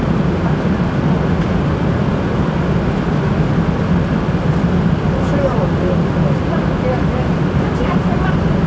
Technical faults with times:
none

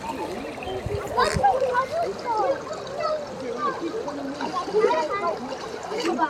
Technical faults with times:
2.71 compressed frames skipped

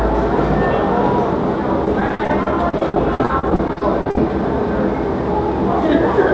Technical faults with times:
1.85-4.18 repeated packet loss (robotic sound)

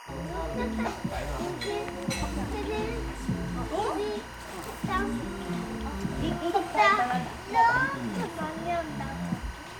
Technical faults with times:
0.00-9.79 timecode bleed

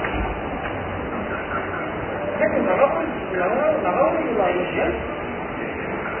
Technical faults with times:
0.00-6.20 Vorbis compression

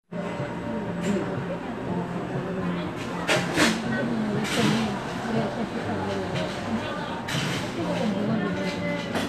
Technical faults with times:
none

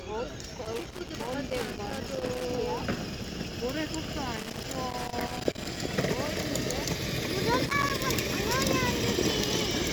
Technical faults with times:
0.65-2.45 loose connector crackle
4.36-5.77 loose connector crackle
7.66-8.02 loose connector crackle

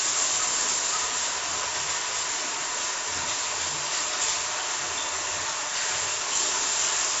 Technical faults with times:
0.00-7.20 4-bit ADPCM compression

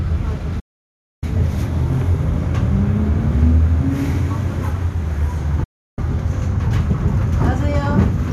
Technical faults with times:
0.59-1.23 digital broadcast dropout
5.63-5.99 digital broadcast dropout

